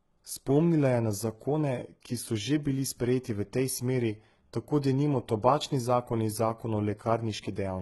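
HE-AAC compression runs throughout this speech clip, and it is heavy. The upper spectrum sounds rebuilt rather than coded, copied up from lower bands, so s sounds come out gritty and metallic, with harmonics that no longer line up above the crossover. This likely comes from a very low bitrate, around 16 kbps.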